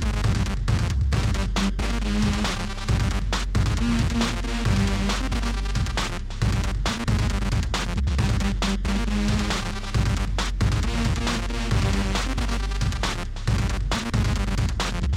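No audible technical faults turn up anywhere in this recording.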